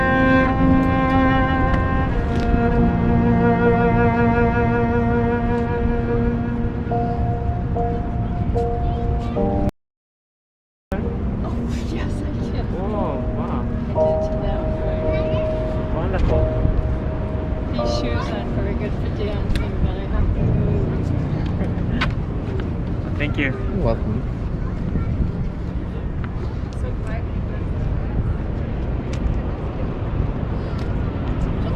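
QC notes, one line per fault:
9.69–10.92 s, audio dropout to silence: the input path likely lost its signal for about 1.23 s, through a disconnect or stray mute, while the recorder kept writing silence. The sound cuts off abruptly into silence with no room tone, then resumes mid-flow, with that stretch missing.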